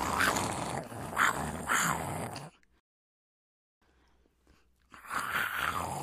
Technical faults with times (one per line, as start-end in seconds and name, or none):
2.80-3.82 rebuffering stall